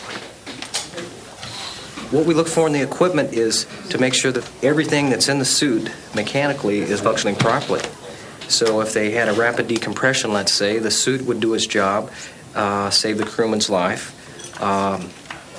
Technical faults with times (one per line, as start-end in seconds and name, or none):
none